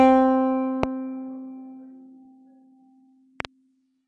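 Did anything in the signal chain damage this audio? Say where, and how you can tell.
Yes. The whole clip carries AAC compression damage at the codec stage. The music is dull and smeared, and nothing sits above about 10.1 kHz. That points to a likely low-bitrate AAC-LC encode, around 32 kbps, where the encoder lowers the cut-off and quantises the remaining bands coarsely.

There are also two bursts of loud pops. The first is a single sharp pop at 0.83–0.85 s, roughly 20 dB above the music. The second is a quick double pop at 3.40–3.47 s, about 15 dB up. The music carries on underneath both, which is how you tell a voltage step or pulse added to the signal. The likely source is the analogue wiring, a switch or a driver glitch.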